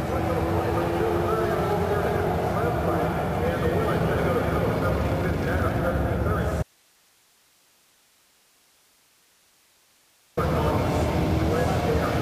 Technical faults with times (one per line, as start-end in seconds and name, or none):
6.63-10.37 audio dropout to a faint residue